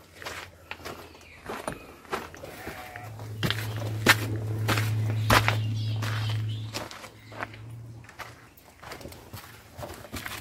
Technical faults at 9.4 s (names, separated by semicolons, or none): drift correction step